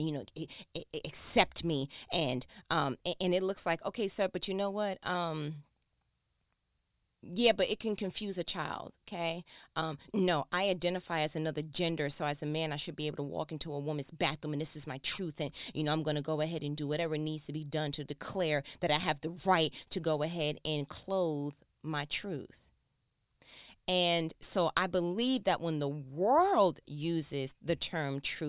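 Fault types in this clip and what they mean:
No technical fault can be heard anywhere in the recording.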